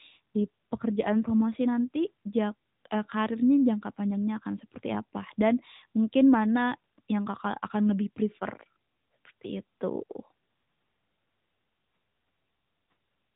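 From start to finish the speech carries AMR narrowband mobile codec damage, plainly audible. Nothing above about 3.8 kHz survives, so it sounds boxed-in, and the vocal-tract model with sparse pulses gives a buzzy, synthetic edge that fits an upper-rate mode around 10.2 kbps.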